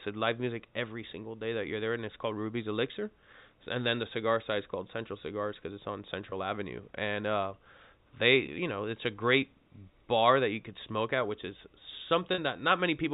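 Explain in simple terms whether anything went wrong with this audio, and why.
Three brief dropouts come from packet loss with pitch repetition: at 6.30–6.32 s, right after "because it's on"; at 8.46–8.48 s, just before "know it's a great"; and at 12.34–12.38 s. The first two lose 20 ms of sound each, the last 40 ms. To cover each gap, the receiver replays the last pitch cycle of the voice, so the gaps sound like a short, slightly buzzy held tone rather than a hard cut. The audio passes through G.711 telephone coding, which limits it to below 4 kHz.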